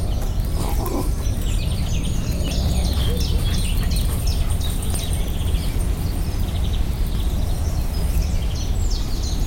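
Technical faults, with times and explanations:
2.48–2.51 s, 4.94–4.98 s and 7.15–7.18 s: damaged data in a compressed stream. Each brief burst of about 30 ms is a short glitch where corrupted bytes made the decoder misread frames and lose sync until it found the next valid frame header.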